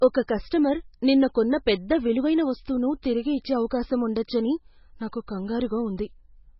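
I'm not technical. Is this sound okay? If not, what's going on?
No. Throughout the whole recording the speech sounds dull and muffled, as if heard through a wall, with a watery, swirly quality and metallic s sounds. This is most likely heavy MP3 compression. To shrink the file, the encoder threw away everything above about 5.6 kHz, which removes the crisp top end, and dropped quieter details that now flicker on and off, causing that bubbling, underwater character.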